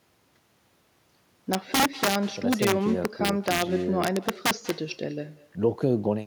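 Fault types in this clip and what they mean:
echo with no canceller: the far end's loudspeaker leaks into its microphone unremoved, so the talker's speech returns about a fifth of a second later, about 20 dB down, thin, a distinct delayed copy rather than reverberant smear.
integer overflow: loud peaks exceed the integer range and wrap to the opposite sign instead of limiting, giving violent cracks far harsher than clipping, at 1.53–2.15 s, 2.53–3.62 s and 4.04–4.70 s.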